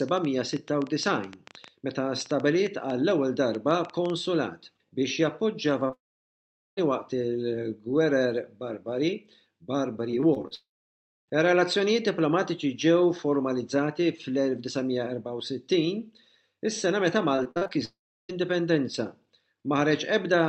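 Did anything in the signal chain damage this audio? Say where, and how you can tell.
Yes. A train of clicks, irregularly spaced at about seven per second, runs from 0.09 to 4.11 s. It is likely interference or a faulty connection or power supply in the analogue wiring.

A short concealed packet loss at 5.87 to 5.91 s leaves about 20 ms missing. The network lost it, and the receiver bridged the hole by extending the preceding sound.

Long network dropouts occur at 5.93 to 6.79 s, 10.55 to 11.30 s and 17.85 to 18.31 s. Each brief extension of the last sound fades into near-silence before audio resumes further on.

Repeated packet loss at 10.11 to 10.53 s (five gaps) and 17.36 to 17.71 s (six gaps, longest 47 ms) gives choppy, patched sound with pieces missing.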